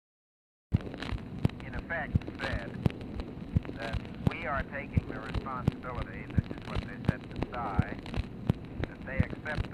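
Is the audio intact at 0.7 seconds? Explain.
No, that's inside a cut-off start: pure digital silence from 0 to 0.72 s, then the audio jumps in mid-sound with no natural attack, because capture began late.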